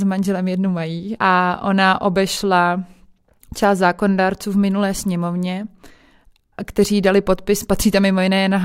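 Nothing stood out on listening to this speech recording.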